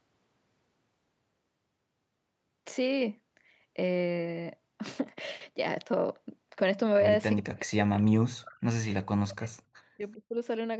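A speech clip. From 7.41 to 8.87 s, and again from 9.14 to 10.38 s, the speech dips hard, by up to about 40 dB. The likely cause is speech suppressed in double talk. The echo canceller took the talker for echo and turned both down.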